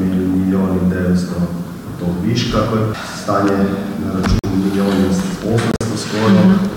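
Corrupt frames were muted twice: the decoder rejected damaged compressed frames and the player substituted silence. Abrupt holes open at 4.39 to 4.45 s, roughly two frames' worth, and 5.71 to 5.82 s, which points to several consecutive frames, with timing intact.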